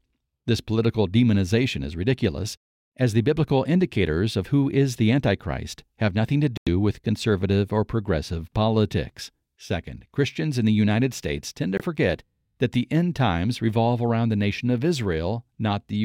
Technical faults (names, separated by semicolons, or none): Bluetooth dropout